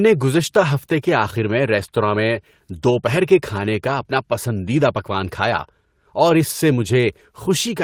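Listening to the speech recording reveals no technical faults at any point in the signal.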